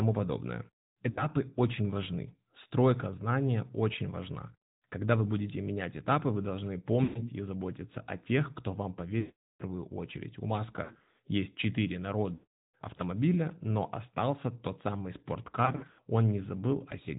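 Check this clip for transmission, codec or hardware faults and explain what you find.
Two faults are present: AMR narrowband mobile codec damage throughout the speech, and lost AMR speech frames at six points.

AMR narrowband mobile codec: throughout, speech is buzzy and synthetic, fitting roughly 10.2 kbps AMR-NB. The spectrogram shows a hard ceiling at 4 kHz.

Lost AMR speech frames: at 1.10–1.26 s, 7.04–7.30 s (after "менять этапы вы должны", before "и заботиться о тех"), 9.20–9.63 s (after "о тех кто вам"), 10.84–11.19 s (scattered), 12.34–13.01 s (after "есть четыре") and 15.66–16.00 s (scattered). The decoder repeats the last pitch and envelope with falling gain, so the sound smears and fades. The waveform shows tapering envelopes and near-silent gaps in the longer losses, up to 400 ms of lost frames.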